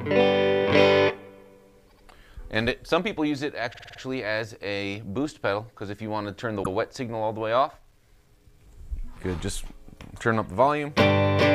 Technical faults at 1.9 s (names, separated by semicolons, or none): repeated frames